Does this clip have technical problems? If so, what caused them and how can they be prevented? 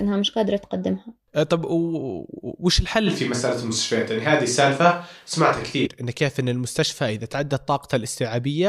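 Yes. From 3.08 to 5.85 s the speech suddenly turns roomy and hollow with thinner bass, then snaps back. The level stays about the same, and little noise is added. That's likely a switch to a distant microphone after the close mic's signal dropped out. Monitoring the close mic's feed live and running a backup recorder would prevent it.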